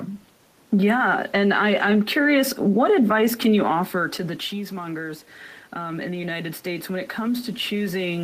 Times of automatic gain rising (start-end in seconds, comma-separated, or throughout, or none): 3.70-8.23